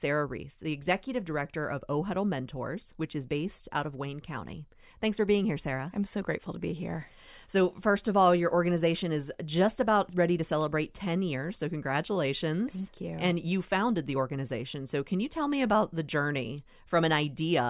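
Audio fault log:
No fault can be heard anywhere in this audio. There is nothing here to log.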